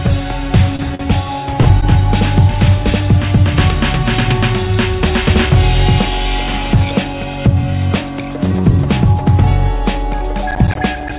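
Early on, the sound briefly hangs and smears three times: at 0.76 to 0.81 s, 0.95 to 1.01 s, and 1.61 to 1.67 s. Each is a short stall from a late packet. The jitter buffer ran dry, so the receiver stretched the last sound by 29, 44 and 40 ms, then resumed where it left off, losing nothing.

From 10.51 to 11.10 s, a gritty, crackling tear rides on the sound, made of many tiny dropouts. This is processor overload crackle. The processor missed its deadlines for about ten buffers of roughly 10 ms each, and each missed buffer became a hard-edged gap of silence. Across the whole clip, the call codec path keeps everything below 4 kHz.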